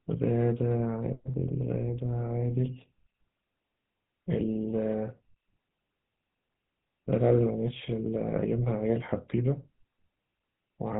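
GSM full-rate codec damage runs through the whole of this speech recording, from start to finish. The codec models the vocal tract as a filter and drives it with a regular pulse excitation that keeps only every third sample, which produces the plainly audible buzzy, gravelly roughness here. Nothing is passed above 3.8 kHz, so sibilants and brightness are gone. The character fits a 13 kbps GSM full-rate link.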